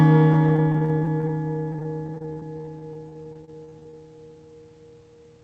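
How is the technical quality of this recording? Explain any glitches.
The recording has one recurring glitch: repeated packet loss (robotic sound), in two stretches.

Repeated packet loss (robotic sound), 0.33 to 1.30 s and 1.72 to 3.95 s. Audio packets kept arriving late or not at all, and the receiver covered each hole by extending the sound it had just played. The holes came in quick succession, mostly brief, the longest about 46 ms in the first stretch and 27 ms in the second. Roughly a fifth of each stretch is patched-in sound, and some short slices are missing outright. The result is choppy and robotic. The call path sounds like Opus, with the top end stopping around 8 kHz.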